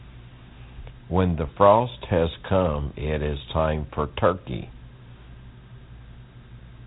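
From start to finish the speech carries Dialogic VOX ADPCM damage, the low-grade 4-bit adaptive coding used in telephone systems. Nothing survives above 3.8 kHz, so the voice sounds boxed-in and dull, and the coder's coarse step sizes add a gritty hiss that rides on every syllable. The grain is plainly audible and fits a 32 kbps stream. A spectrogram shows a hard ceiling at 3.8 kHz and a speckled noise floor tracking the speech energy. The waveform looks fuzzed.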